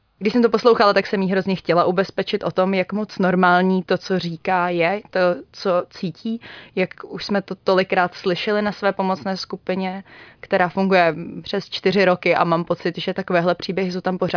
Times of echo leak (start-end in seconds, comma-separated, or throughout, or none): none